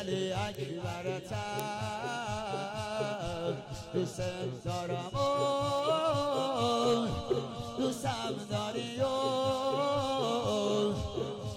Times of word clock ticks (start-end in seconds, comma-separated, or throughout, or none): 0.55-11.54